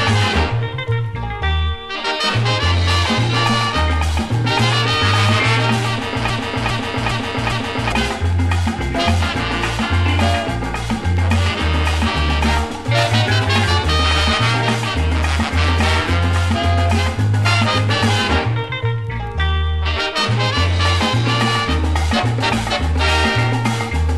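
At 6.3 s the audio locks into a broken-record loop: a fragment about 0.41 s long plays four times back to back, identically, until 7.92 s. The repetition is exact, with no variation between passes, and whatever sound belonged in that span of roughly 1.6 s never arrives. The likely cause is a stalled player, encoder or stream that kept resending the last buffered fragment until data resumed.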